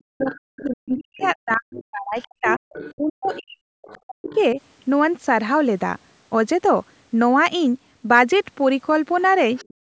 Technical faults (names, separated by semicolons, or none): speech suppressed in double talk; other side's voice leaking through